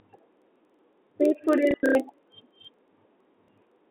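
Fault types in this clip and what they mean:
Filter restarted on every block: The filter resets at each block boundary. A faint tick repeats at about 21.5 Hz throughout, which fits 2048-sample blocks.
Packet loss with last packet repeated: Lost audio is filled by replaying the previous packet. Around 1.71 to 1.95 s this causes robotic stutters, and a single repeat at 3.45 s gives a small blip.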